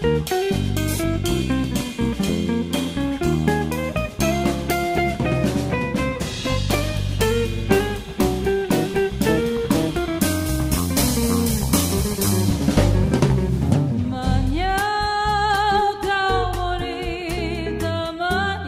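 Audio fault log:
No technical faults are audible anywhere in this recording.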